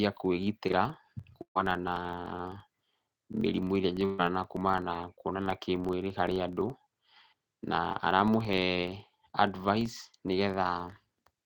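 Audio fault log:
Throughout: filter restarted on every block. The filter drops its memory at each block boundary and starts from silence, so every block opens with a small transient. The result is a steady buzz near 23.4 Hz that rises and falls with the speech level, which fits a 2048-sample block at 48 kHz.
1.42–1.57 s and 4.05–4.21 s: burst of packet loss. About 140 ms of speech is missing each time. The receiver extends the last sound for roughly 135 ms, turning it down as it goes, and the first gap fades to about 90 ms of silence before the speech resumes further on.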